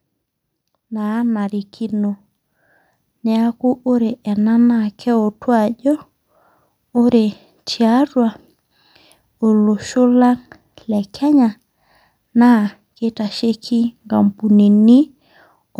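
Automatic gain rising from 0.88 to 2.24 s: the gain control judged the incoming speech too quiet and stepped its gain up by about 5 dB over that stretch, so the voice and the background swell together rather than the voice alone growing louder.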